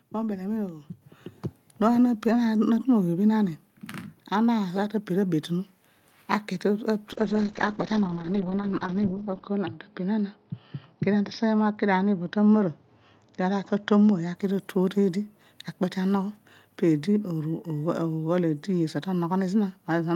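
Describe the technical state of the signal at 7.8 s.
At 7.8 s the signal is inside a call bitrate drop lasting from 7.12 to 14.41 s. Coarse coding, consistent with about 11 kbps, leaves the speech rough and muffled. A spectrogram shows everything above 6 kHz abruptly cut away.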